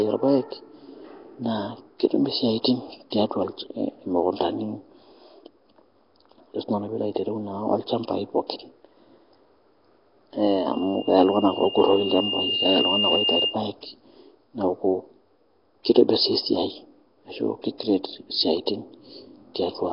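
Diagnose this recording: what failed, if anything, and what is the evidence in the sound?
The codec stage is at fault throughout. The speech carries a rough, hissy halo and a smeared, underwater quality, the coding damage is heavy, and nothing survives above 5.3 kHz. This is likely Nellymoser compression, where fixed two-bit-per-sample coding starves weak bands and fills them with noise.

A loudspeaker feedback squeal occurs in the acoustic and analogue loop from 10.72 to 13.62 s. A single 2.8 kHz tone swells over roughly two seconds to about 5 dB above the speech. The microphone is picking up its own loudspeaker, and the loop gain exceeds one at that frequency.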